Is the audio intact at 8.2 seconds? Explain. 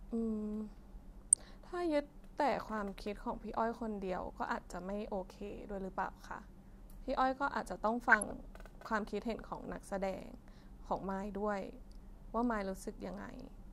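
No. From 8.10 to 8.31 s there is DAB burbling: weak reception lets bit errors, a small fraction of a percent, slip past error correction into the MP2 data, so wrong samples put short blips of noise in single sub-bands, giving a burbling sound over the speech.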